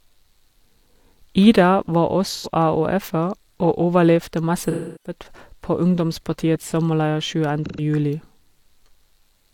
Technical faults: AAC frame loss with concealment

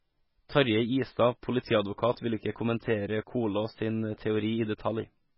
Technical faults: MP3 compression

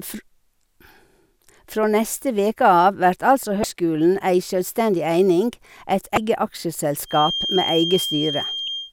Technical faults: damaged data in a compressed stream; feedback whistle

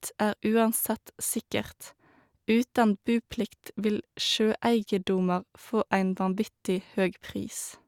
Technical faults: none

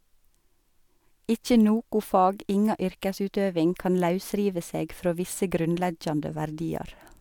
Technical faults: none

